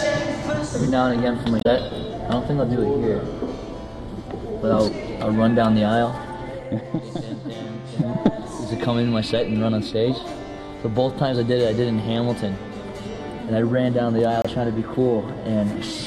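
At 1.58–1.66 s and 14.42–14.46 s, damaged data in a compressed stream makes the decoder misread frames and lose sync, giving a brief chirp, squawk, click or short hole each time.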